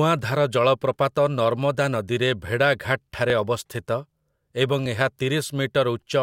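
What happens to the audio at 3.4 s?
At 3.4 s the speech falls within a run of regular clicks every 1.56 s, from 0.19 to 4.86 s. These are likely clock drift buffer slips, dropping or repeating small blocks of samples.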